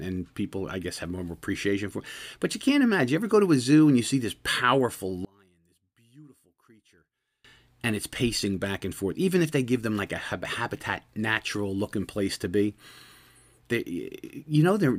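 Right after "you see this powerful", at 5.25 s, the speech suddenly drops by about 31 dB and stays sunk until 7.44 s, coming back just before "and it's pacing back". What's left in that stretch is a faint ghost of the voice. The likely culprit is one channel inverted: with one side's polarity flipped, the centred voice cancels itself when the two channels get summed to mono, leaving only the small difference between them.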